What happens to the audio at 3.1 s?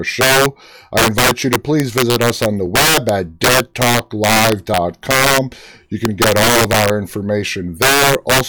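Violent, sharp cracks break through the louder speech, harsher than clipping. This is integer overflow, present across the whole clip: the signal is driven about 10 dB too hot, so roughly one sample in twenty exceeds the integer limit and wraps to the opposite sign.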